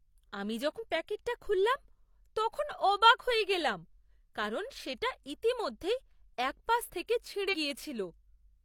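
At 0.75 to 0.79 s and again at 7.49 to 7.55 s, the speech breaks up briefly from damaged data in a compressed stream. The decoder misreads corrupted frames and loses sync until the next frame header.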